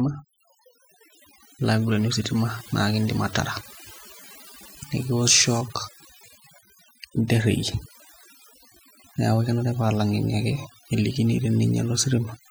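Overdone noise removal runs through the entire speech recording. The noise reduction was set too aggressively, pulling individual frequency bands down or out whenever they approached its noise estimate, taking quieter voice components along. Pauses collapse to near silence with twinkling specks.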